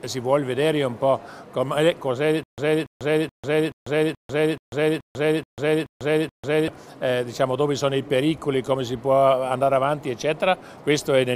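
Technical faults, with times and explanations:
2.43 to 6.68 s, stutter with silent gaps: likely a stalled stream replaying its last fragment on each retry, so a 284 ms burst repeats ten times, each followed by about 145 ms of silence, and the intervening audio is lost.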